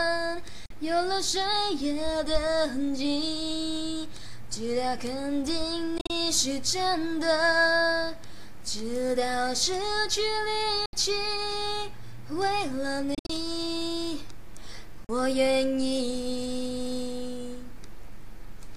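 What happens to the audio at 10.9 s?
The sound cuts out from 10.86 to 10.93 s, a silent gap of about 73 ms, and resumes as if it had played on. This is a Bluetooth dropout, likely from late packets discarded at the headphones. The gap fits roughly five lost packets.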